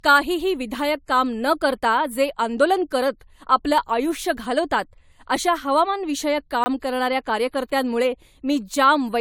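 Throughout the speech there is a swirly, hollow quality, and consonant attacks sound smeared. This is generation loss. The sound was likely re-encoded with AAC-LC about three times, in a chain that points to 96 kbit/s. Each pass re-quantised on a shifted frame grid, so the errors stacked.

From 6.64 to 6.66 s, just after "अशा हवामानविषयक" and before "करणाऱ्या कार्यकर्त्यांमुळे", there is a block of digital silence. For 20 ms the sound drops straight out and then returns. There is no fade at either edge. It is heard as a brief pop-like hole.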